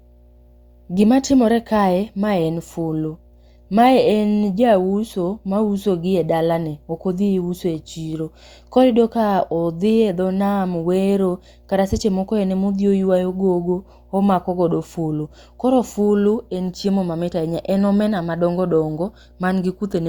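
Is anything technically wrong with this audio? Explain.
Yes. Mains hum runs through the whole speech clip, a steady low tone at 60 Hz. Power-line current is getting into the signal path, most likely through a ground loop between connected equipment or from a transformer sitting close to a cable or input, so the 60 Hz supply frequency rides underneath everything. It sits roughly 30 dB below the speech.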